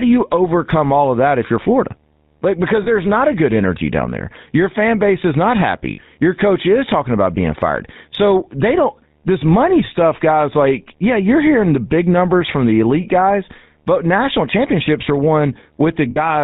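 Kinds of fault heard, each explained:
GSM full-rate codec: a buzzy, gravelly roughness throughout with nothing above 4 kHz, because the speech is rebuilt from a vocal-tract model driven by sparse, regular pulses.
lost GSM frames: short, rough, metallic rings where the sound briefly freezes, because each missing frame was filled by repeating the last good one.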